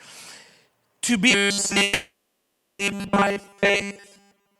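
Robotic sound from repeated short buffers begins at 1.31 s and runs to the end of the clip. The speech collapses into a rigid, metallic buzz pitched at 200 Hz, which roughly follows the syllables. The likely cause is that fresh audio stopped arriving often enough, so the playback side kept looping the most recent 5 ms fragment. Essentially all of the sound in this stretch is made of those repeats, which is why the buzz never lets up.

A call audio freeze sits inside that stretch, from 1.83 s to 2.82 s. For 960 ms the sound hangs on as a fading buzz without dropping to silence, then picks up again. Packets were likely delayed in transit until the jitter buffer ran dry, and the receiver stretched the last sound to cover the wait. Nothing is skipped when playback resumes, so everything after this point runs 960 ms later than it should.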